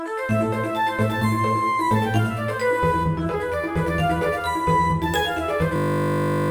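A system hang loop runs from 5.76 s to 6.5 s. The playback system froze while the sound hardware kept replaying one 20 ms slice of its buffer. That slice repeats 50 times a second, giving a steady buzz at 50 Hz, and roughly 0.7 s of audio is lost.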